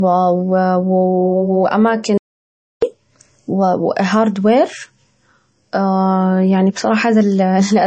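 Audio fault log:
Throughout: low-bitrate audio saved at a high bitrate. The speech has nothing above 8.4 kHz, and it carries the smeared, watery texture of heavy MP3 compression. This fits a file first encoded at a very low bitrate, around 31 kbit/s, and later saved again at a high one, around 192 kbit/s. The likely cause is that the second encoding could not restore the detail the first had thrown away. It simply kept the cut-off and the artefacts.
2.18 to 2.82 s: audio dropout to silence. The speech cuts off abruptly and returns mid-flow after about 0.65 s. The gap is dead digital silence with no room tone underneath. The likely cause is that the input signal was lost for that stretch while the recording carried on writing silence. Whatever was spoken in that interval is gone, so the speech jumps across the hole.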